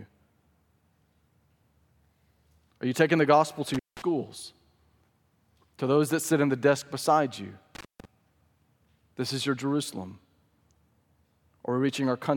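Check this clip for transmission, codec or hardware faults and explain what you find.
There are two dropouts from an intermittent contact. At 3.74 s, after "taking the gospel to", and at 7.75 s, after "the desk beside you", a loose connection briefly opens the signal path. The speech cuts out for about 180 ms and 190 ms, with crackle at the break and return and faint hiss in between.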